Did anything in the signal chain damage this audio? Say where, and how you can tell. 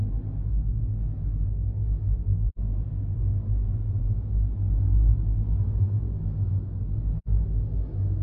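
Yes: AAC frame loss with muting in the codec stage. The holes at 2.49 to 2.58 s and 7.18 to 7.28 s appear as blank, full-band spectrogram gaps. Each fits two zeroed frames, with edges faded by overlapping windows.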